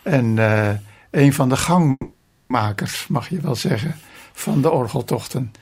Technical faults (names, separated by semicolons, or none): call audio freeze